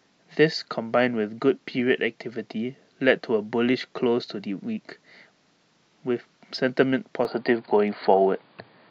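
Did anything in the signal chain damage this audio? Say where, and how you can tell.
Yes. At 7.25 s the speech suddenly turns dull and boxy, and it stays that way to the end at 8.91 s. Nothing above 4.8 kHz survives after that point. The level shifts by roughly 5 dB, and a new, faint noise floor appears far below the speech. There is no gap at the change. This points to the input stage. The likely cause is an input switched to a poorer device, with a narrower band, its own gain and its own noise.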